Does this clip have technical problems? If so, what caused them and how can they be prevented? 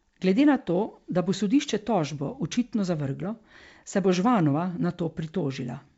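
No, there are no technical faults in this speech clip. It carries the audio through G.722 wideband telephone coding at 64 kbit/s, with the band reaching up to about 7 kHz and at most a faint hiss in the upper band.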